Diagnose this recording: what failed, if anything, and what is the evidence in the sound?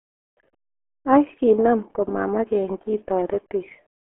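RealAudio 14.4 codec artefacts, throughout: a codec-stage failure. The speech is muffled and gargly, nothing above 3.8 kHz, consistent with a dial-up-era 8 kbit/s stream.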